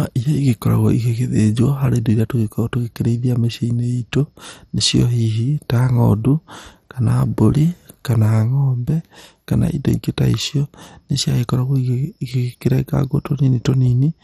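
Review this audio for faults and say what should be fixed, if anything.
The speech runs dull and gurgly for the whole clip, with nothing above 14.4 kHz, which is most likely heavy MP2 compression starving upper sub-bands of bits. Export from the original at a much higher bitrate, or use a lossless format.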